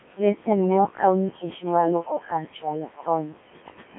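From start to end, the speech runs through the Codec 2 vocoder. Only pitch, voicing, loudness and a rough spectral shape survive. The decoder rebuilds the voice from sine waves, so the original waveform is gone. The result is robotic and buzzy. The damage is heavy. The sound sits in a narrow telephone band, roughly 150 Hz to 3.4 kHz. The coarse, smeared detail points to Codec 2's 1.3 kbit/s mode.

Noise suppressor artifacts also run through the whole clip. The suppressor pulls down the bands it judges to be steady noise, frame by frame. Between phrases the background drops by about 19 dB. Under the speech it climbs back. The room noise sits about 10 dB below the speech.

From 0.17 to 0.49 s comes speech cut by the noise suppressor. Here the suppressor mistook part of the speech for noise. It turned that part down with the background, by as much as about 20 dB. Roughly 150 ms of speech is affected within that span. 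Those sounds come across swallowed and faint.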